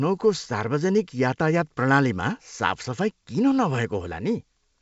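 No technical faults are audible.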